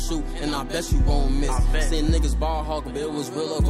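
No technical faults can be heard anywhere in the recording.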